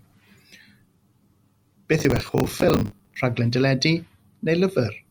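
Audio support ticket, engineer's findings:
Gritty crackle and tearing over the speech, 1.99 to 3.16 s, clearing once the load passes. Processor overload crackle in the audio callback/DSP path. CPU repeatedly missed buffer deadlines, around 70 of them; each miss replays stale audio with hard edges. Buffers of around 10 ms.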